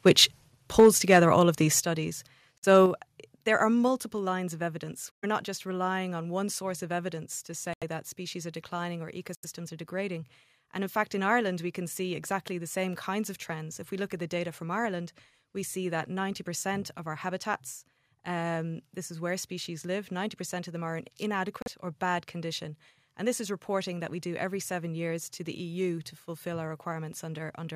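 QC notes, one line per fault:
0.07–0.24 s, 0.79–1.17 s and 2.75–2.77 s, microphone overload: the loudest moments of the speech take on a harsh, crackly edge. Peaks run about 3 dB past the converter's limit in the first two spans, with roughly 3 percent of samples flattened in the second, and just touch the limit at 2.75 s. The likely cause is input volume set too high, so the converter squares off the tops of the waveform.
0.80 s, 1.80 s, 2.86 s and 3.88 s, microphone volume stepped down: voice and background drop together in sudden steps of about 3, 6, 5 and 2 dB, the first landing inside the distorted burst and the third shortly after the clipped peak at 2.75 s. This is likely the call software reacting to the overload by cutting the device's input gain in discrete steps rather than smoothly.
2.58–2.65 s, 5.11–5.24 s, 7.73–7.84 s, 9.35–9.45 s and 21.62–21.68 s, Bluetooth stall: the speech cuts out to silence for 49, 114, 83, 81 and 39 ms, then carries on. 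The likely cause is interference delaying wireless packets so the headphones' buffer runs empty and playback halts until the resent data arrives.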